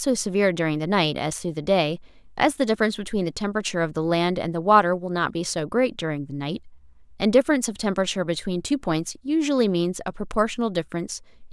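No technical faults are audible.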